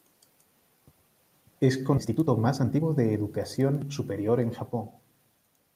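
At 1.97 to 1.99 s the speech jumps forward. This is a skip ahead. About a second of audio was dropped while later audio was already queued. Nothing fills the cut. The two sides join almost directly, so the sound lurches abruptly.

From 2.01 to 4.47 s comes a jitter buffer speed-up. The buffer held more audio than it wanted. It trimmed many short pitch-period pieces, about half a second in total. Speech runs at 123% speed with unchanged pitch. It sounds hurried.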